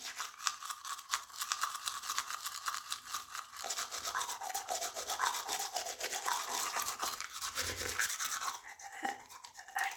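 A recording of sounds where a second, slower capture path or an out-of-step edit has most likely mixed the audio in twice, creating a doubled audio track. From 1.43 s to 6.75 s, an unaltered full-band copy trails about a second behind at roughly equal loudness, with no decay, switching on and off abruptly.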